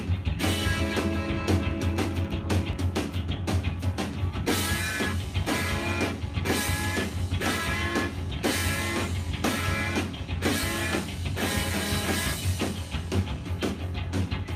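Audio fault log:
2.73 s and 6.68 s: audio missing between chunks. Each point has a skip where roughly 50 ms of sound vanishes and the edges join with no gap. They sit about 4 s apart, likely from 4-second chunk processing losing a sliver at each handover.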